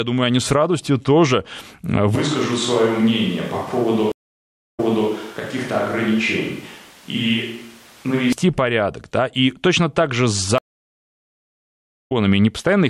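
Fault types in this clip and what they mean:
Switch to a distant microphone: From 2.15 to 8.33 s the speech suddenly turns roomy and hollow, with the low end thinned out. The level drops by about 5 dB and the room noise rises to roughly 25 dB below the speech. That points to the close mic's feed dropping out and a more distant pickup, likely something like a camera mic, taking over. It snaps back just as abruptly at the end.
Stream reconnect: The connection breaks, the player goes quiet, then reconnects and starts a fresh decoder partway through the stream. At 4.12 s there's a 615 ms gap, and playback picks up 366 ms earlier than where it stopped, so a short stretch repeats. At 10.58 s the gap runs about 1.5 s, and it comes back slightly later, skipping a small bit of audio.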